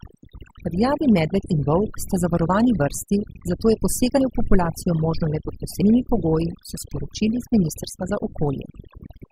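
From the start, the background sits in an unnatural near-silence dotted with twinkling specks, and the speech loses its quieter parts, which drop away. This is overdone noise removal: a noise reduction stage set far too aggressively on a noisy recording, pulling individual frequency bands down or off whenever they approached its noise estimate, so soft speech detail went out along with the hiss.

At 4.17 s, between "zavarovani vrsti zato je" and "v populacijo", the speech lurches forward, losing around 40 ms. At 5.81 s, between "le pod" and "pogoji so sporočili", a similar jump drops about a tenth of a second. Both are compressed frames skipped: whole frames never reached playback. The lost spans fit 20 ms frames, a couple at the first point and about five at the second.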